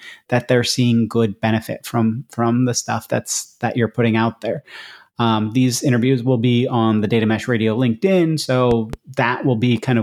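At 8.71 s a loud pop breaks in: two sharp pops in quick succession, spread over about a quarter of a second to 8.96 s, standing roughly 10 dB above the speech, which continues underneath. The likely cause is a sudden voltage step or pulse, such as static, a switch or a plug, added to the signal. On a waveform each pop is a tall spike towering over the speech envelope; a spectrogram shows two thin vertical stripes spanning the full frequency range.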